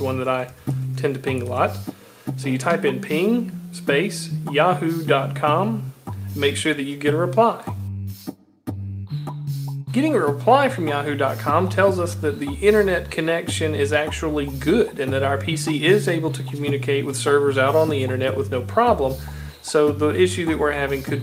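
No technical faults are audible.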